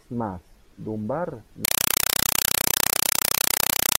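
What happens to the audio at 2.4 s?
Loud, chattering static replaces the speech from 1.65 s onward: a compressed stream played as audio, with undecoded Dolby Digital frames bursting 31 times a second.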